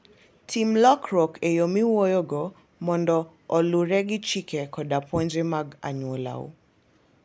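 No technical faults are audible.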